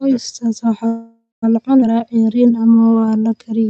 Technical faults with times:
0.87-1.44 call audio freeze
1.80-1.84 skip ahead
1.96-3.44 jitter buffer slow-down

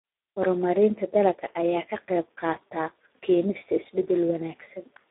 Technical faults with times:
0.00-5.11 Speex codec

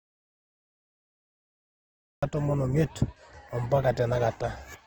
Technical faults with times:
0.00-4.87 transcoding between lossy codecs
0.00-2.23 audio dropout to silence

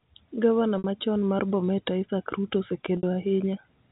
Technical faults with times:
0.78-0.84 packet loss with pitch repetition
2.97-3.03 packet loss with pitch repetition

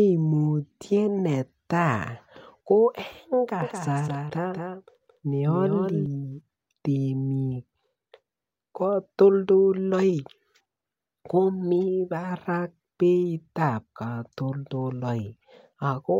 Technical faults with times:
3.62-6.06 doubled audio track

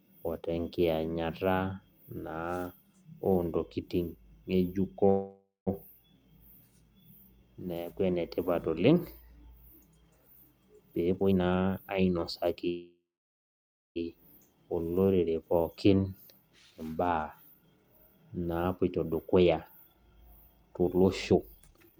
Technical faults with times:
5.09-5.69 call audio freeze
10.89-12.57 jitter buffer speed-up
12.69-13.98 call audio freeze
16.71-19.43 jitter buffer speed-up
19.87-21.99 jitter buffer speed-up

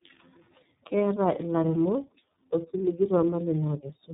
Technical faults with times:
0.00-4.14 tandem speech coding

